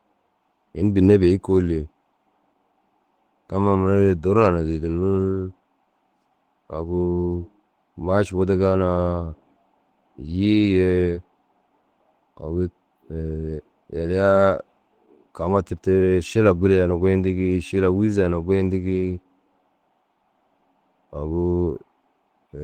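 Speech runs the full clip with Opus voice compression throughout, and the damage is plainly audible: a hoarse, slightly robotic texture from the coarsely coded excitation. The band still extends to about 20.2 kHz, so this is not the muffled, band-narrowed sound of a plain low-pass or a lower Opus rate. The low band and the top band appear to be coded by separate layers, which fits hybrid mode at around 16 kbps with 20 ms frames.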